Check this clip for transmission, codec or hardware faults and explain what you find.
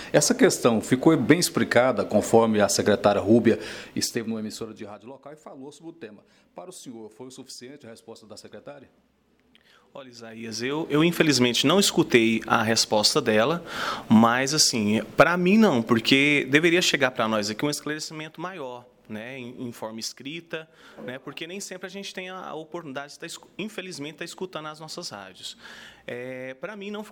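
No transmission, codec or hardware faults turn up in this clip.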